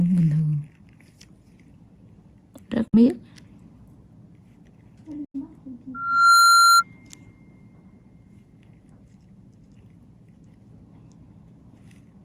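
At 2.88 to 2.94 s and again at 5.25 to 5.35 s, the sound cuts to silence and resumes as if it had kept playing. These are Bluetooth dropouts, likely from packets reaching the headphones too late and being discarded. The second gap is longer.

From 5.94 to 6.83 s, a loudspeaker feedback squeal appears. A single 1.4 kHz tone swells over roughly 0.4 s to around 10 dB above the sound. The microphone is picking up its own loudspeaker, and the loop gain exceeds one at that frequency.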